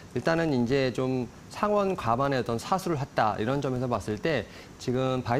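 A filter in the processing chain is restarted on every block, discarding its internal state and starting each block from silence instead of carrying on from the previous samples. Each block boundary therefore starts with a small transient, and across the whole recording these add up to a steady buzz at about 43.1 Hz, which fits a 1024-sample block. The buzz rises and falls with the level of the audio.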